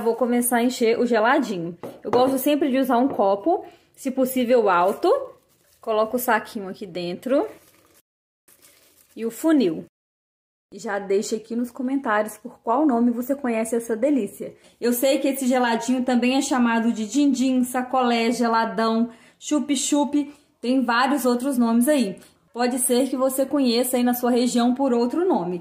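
No faults detected; the signal path holds throughout with nothing to flag.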